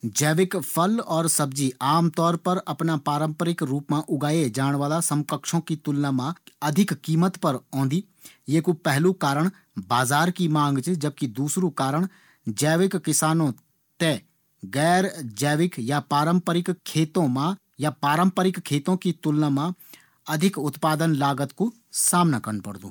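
No technical faults can be heard anywhere in this speech recording. Nothing in the audio stands out as going wrong at any point.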